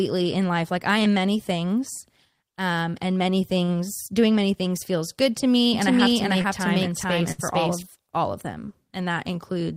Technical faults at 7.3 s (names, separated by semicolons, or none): doubled audio track; burst of packet loss